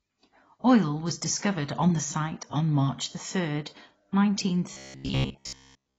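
From the start, the whole speech track has what sounds like AAC compression, most likely AAC-LC squeezed to a low bitrate, somewhere near 24 kbps by the sound of it. The cut-off sits low, so the top end is gone and everything feels dull. The damage is plainly audible: the quantiser is starving bands, which smears the consonants and gives the sibilants and held vowels that fizzy, warbly texture.

Then from about 4.73 s to 5.98 s it goes robotic, and that's likely the repeated-short-buffers problem. Fresh audio stops arriving often enough, so the playback loops the last little chunk over and over, replacing most of the real signal in that stretch. The loops lock in a steady buzz around 66.7 Hz, which fits a buffer of roughly 15 ms, and the speech turns into a stiff metallic drone that only loosely tracks what's being said.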